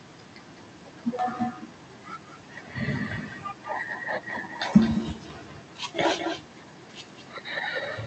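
Speech in which every phrase is trailed, throughout, by a quieter, thinner copy about a fifth of a second behind and roughly 9 dB down. This is echo with no canceller: the far end's loudspeaker feeds its microphone, returning the talker's voice over the call link, whose top end stops near 8 kHz.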